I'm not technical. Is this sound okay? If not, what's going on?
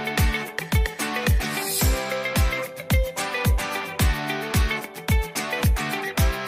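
Yes, no faults can be heard.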